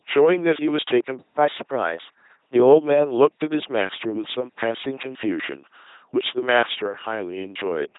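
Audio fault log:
throughout: LPC-10 vocoder, heavy buzzy robotic speech where each moment is forced voiced or unvoiced, nothing above 3.8 kHz, which fits a 2.4 kbit/s stream.
1.38–2.54 s: catch-up at higher speed, playback runs at 1.15x to recover after a stall, so the speech hurries and rises about two semitones before settling.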